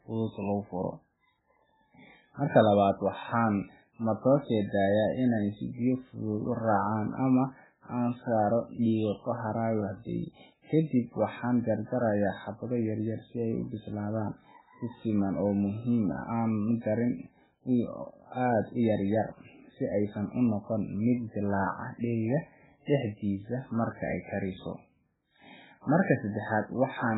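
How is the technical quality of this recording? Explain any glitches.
The technical quality is poor, with heavy coding damage across the whole speech recording. The sound is likely from MP3 compression at a very low rate, around 8 kbps. Nothing survives above 3.8 kHz, and the weak spectral detail that remains comes and goes frame by frame, giving a watery, swirling texture. That flicker separates it from a plain low-pass filter, which would dull the top without the unstable swirl.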